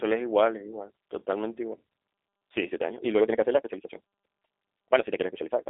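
A G.729 speech codec throughout this speech clip, with plainly audible damage, fits an 8 kbit/s VoIP link. The codec models each short frame with a vocal tract filter, a pitch predictor and a handful of pulses, so the sound comes out slightly rough and synthetic, with a buzzy, processed edge. The band is held to a telephone line's roughly 300 Hz to 3.7 kHz, and nothing is heard above 3.8 kHz, which removes the airy top and the crispness of sibilants. From 1.86 s to the end, the speech suddenly runs at about 1.93 times its earlier pace while the pitch stays where it was. The likely cause is a time-stretched section, where software squeezed the audio to a shorter length by dropping short pieces rather than resampling it. That leaves the delivery rushed.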